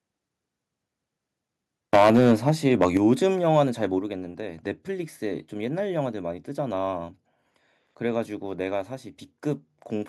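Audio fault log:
1.93–3.12 s, microphone overload: loudest speech peaks flattened and harsh, pushed about 10 dB past full scale, with roughly one sample in twenty cut off, likely from excessive input gain.
1.96, 2.97, 3.99 s, microphone volume stepped down: sudden level drops of about 3, 6 and 6 dB affecting speech and background, likely automatic gain control reacting to the distorted peaks.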